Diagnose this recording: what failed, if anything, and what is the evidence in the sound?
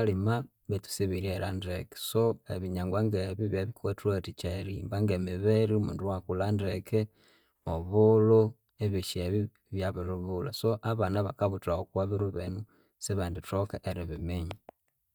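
Nothing failed; no faults heard.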